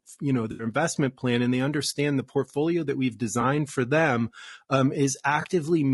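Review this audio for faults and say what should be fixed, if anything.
The whole clip has low-delay AAC compression artefacts. The speech sounds rough and grainy, with noise between harmonics and a thin top band. The damage is plainly audible. The likely cause is AAC-ELD at a low rate, around 32 kbps, where short frames resolve pitch poorly. Raise the bitrate or use a longer-frame codec.

AAC frame loss with concealment occurs three times. The first is from 0.51 to 0.65 s, after "you know" and before "investment plan and they". It is a smeared, noisy patch lasting about 80 ms. The second is at 3.41 to 3.44 s, between "the portfolio that we've" and "for them um". The third is at 5.41 to 5.46 s, after "for them um". Each of the last two is a brief 20 ms blur. The decoder rebuilt the missing audio from the last good spectrum. Add redundancy or forward error correction, and a jitter buffer, to stop frames being lost.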